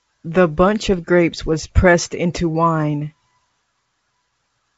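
The speech comes through G.722 wideband telephone coding with at most a faint trace of that coding and no technical faults anywhere in the signal.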